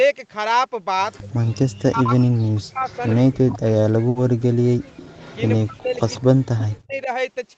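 A speech recording carried over a call, with three kinds of fault. The first is echo leak, heard three times: a faint trailing copy of the speech at 1.13 to 1.2 s, again at 2.88 to 3.21 s, and longest at 4.96 to 6.66 s. Each copy lags by 159 ms. It grows from about 30 dB below the speech, to about 25 dB, to about 20 dB by the last stretch. The likely cause is an echo canceller on a loudspeaker end that failed to remove everything its microphone picked up, so a delayed copy was returned. The second fault is speech suppressed in double talk. From 1.2 to 4.93 s, the talker's level drops and cuts out in patches, for about 3 seconds in total, at worst about 40 dB down. It happens again from 5.59 to 7.09 s, for about a second in all. This is likely the canceller ducking everything while both sides spoke, because it could not tell the near talker from the echo. The third fault is a burst of packet loss from 4.09 to 4.17 s. 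The last sound is stretched and faded for 60 ms. Then the audio resumes with 60 ms missing, so the speech skips ahead.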